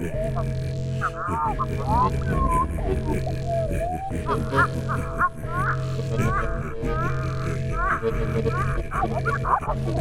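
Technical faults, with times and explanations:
8.38–10.01 s, time-stretched section: the pace abruptly jumps to 1.83 times at unchanged pitch, sounding rushed, likely from software dropping short pieces to shorten it.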